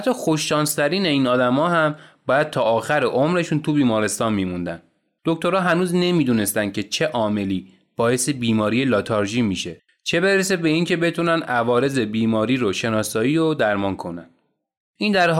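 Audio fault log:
No faults detected in this speech recording.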